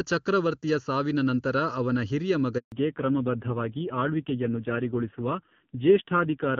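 Throughout the speech, channel delay (comb filtering) gives a hollow, phasey colour. One channel runs late by under a millisecond, and when the two are summed to mono, shared content cancels at evenly spaced frequencies, with the first notch near 700 Hz.

At 2.58 s the speech dies away and stays silent until 2.72 s, a 140 ms handover gap. The call was switching networks and no speech frames arrived in that window, so whatever was said during it is gone.

From 2.72 s to the end there is a fallback to narrowband. The clear HD Voice sound of the opening, consistent with AMR-WB near 23.85 kbit/s, drops to a dull, rough quality with nothing above 4 kHz, which fits AMR-NB at a low rate around 5.9 kbit/s.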